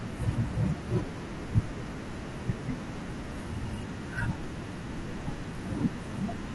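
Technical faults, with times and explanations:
Throughout, low-delay AAC compression: the speech sounds plainly rough and grainy, with noise filling the gaps between voice harmonics, likely from AAC-ELD near 32 kbps.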